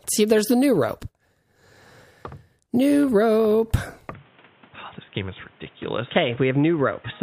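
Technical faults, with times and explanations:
4.13 s to the end, input switched to a poorer device: the sound suddenly goes dull and boxy with no gap at the changeover. Everything above about 3.8 kHz disappears, the level drops by about 5 dB, and a new background noise sits about 30 dB under the signal. That's most likely the system jumping to a narrower-band mic or a headset call profile, which brings its own bandwidth limit, gain and noise floor.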